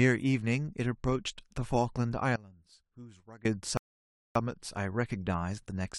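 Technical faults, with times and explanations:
2.36–3.45 s, one channel inverted: The speech suddenly drops by about 21 dB to a faint copy of itself, then returns at full strength at 3.45 s. The likely cause is one stereo channel playing with reversed polarity, so the centred voice cancels when the two sides are summed to mono and only their small difference survives.
3.77–4.35 s, rebuffering stall: The speech stops dead into silence for 580 ms, then picks up at exactly the point where it halted, with no syllable missing or repeated. The player has run dry of downloaded audio and waited for more before continuing, so the gap adds time rather than removing anything. A dropout or packet loss would skip part of the speech, and a glitch would leave a click or repeat. This pause is clean and the timeline simply stretches by 580 ms.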